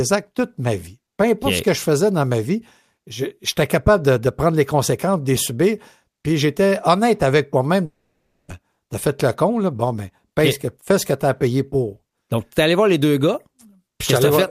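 From 7.85 to 8.52 s, a likely long network dropout: speech fades into a buzz, then flat waveform and blank spectrogram. About 0.6 s is lost.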